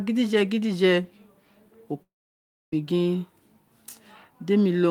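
A speech clip with a long network dropout from 2.02 to 2.73 s: the last sound smears into a brief fading buzz, then 0.64 s of silence, and speech resumes with 0.7 s gone. Unlike a brief packet glitch, concealment gives out, likely from sustained packet loss.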